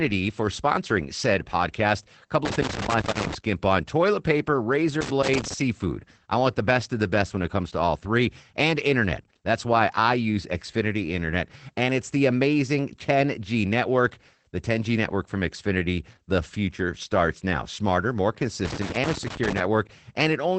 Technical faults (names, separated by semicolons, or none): Opus voice compression; loose connector crackle